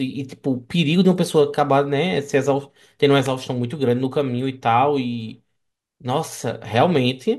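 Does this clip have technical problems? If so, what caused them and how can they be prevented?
Yes. At 3.26 s a sharp snap, peaking around -10 dBFS, cuts across the speech for only a few milliseconds. This electrical switching spike is likely a nearby switch, motor or static discharge arcing, with the audio line picking up the burst. Keeping cables away from switched mains gear, using balanced shielded lines and suppressing noisy switches would prevent it.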